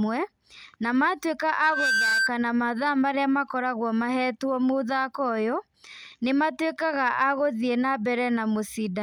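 From 1.55 to 2.31 s, loudspeaker feedback squeal: the speech path loops back at 1.6 kHz, swelling in about a third of a second to sit roughly 5 dB above the speech.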